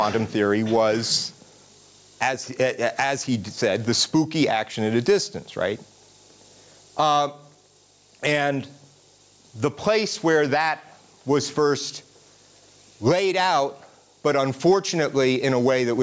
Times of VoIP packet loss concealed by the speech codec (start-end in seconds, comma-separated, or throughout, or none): none